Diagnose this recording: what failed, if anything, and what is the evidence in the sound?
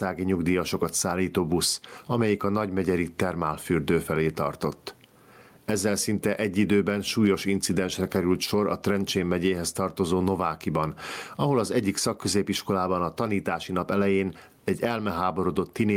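The gain swings by around 15 dB throughout the speech, pulled down on each loud sound: gain pumping, likely from excessive input gain driving a fast limiter.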